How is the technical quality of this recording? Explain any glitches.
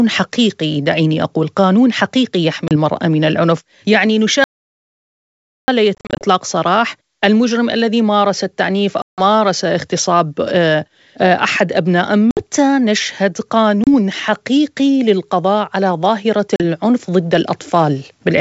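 The recording has two kinds of glitch: repeated packet loss on what sounds like an ADPCM call, and one stretch of complete silence. The wideband telephone coding itself adds only faint artefacts, which fits G.722 running at its full 64 kbit/s.

Packet loss on the ADPCM call occurs at 2.68–2.72 s, 5.95–6.25 s (about 180 ms lost, scattered across 260 ms, with no gap longer than 40 ms), 9.02–9.21 s (160 ms), 12.31–12.43 s (60 ms), 13.84–13.88 s (30 ms) and 16.56–16.62 s (40 ms). Each gap is a hard-edged hole of silence. Afterwards the decoder's adaptive predictor and step size no longer match the sender's, so the speech comes back with a click, a wrong level or slight distortion before it settles.

An audio dropout to silence runs from 4.44 to 5.68 s, about 1.24 s. The sound cuts off mid-flow into silence with no room tone, and nothing from that span survives. The likely cause is a lost input, such as a disconnected device or a failed link, while silence kept being written.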